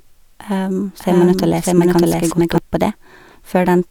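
From 1.0 s to 2.58 s a doubled audio track appears: a second full-band copy of the speech runs about 0.7 s behind at roughly equal loudness, likely from a slower duplicate capture path. Unlike an echo, it has no decay or room colour and cuts in and out abruptly.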